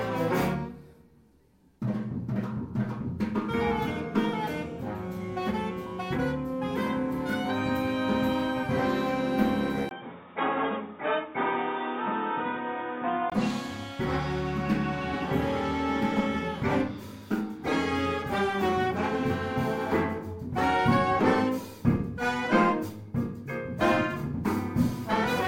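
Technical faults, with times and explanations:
9.89–13.32 s, input likely switched to a poorer device: a 20 ms gap, then sound dull above 3.8 kHz, spectrogram band cut, new noise floor visible about 35 dB down.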